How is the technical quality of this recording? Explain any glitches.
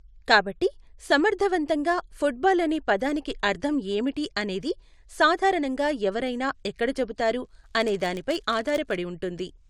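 The recording has one glitch near the end of the speech.

A filter restarted on every block affects the audio from 7.43 to 8.98 s, right after "సాధారణంగా ఎవరైనా ఎక్కడ చెబుతారు". The filter loses its memory at each block boundary and starts again from zero, so each block opens with a tiny transient. These repeat at 100 Hz, which points to blocks about 10 ms long. They merge into a buzz under the speech that rises and falls with its loudness.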